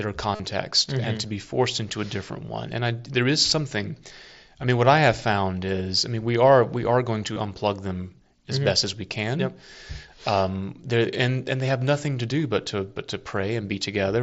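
Concealed Bluetooth headset packet loss at 0.35 to 0.40 s and again at 7.33 to 7.36 s: runs of voice packets went missing over the wireless link, and the receiver filled roughly 45 ms and then 30 ms by repeating recent waveform, heard as a brief buzzy hold before a slight warble.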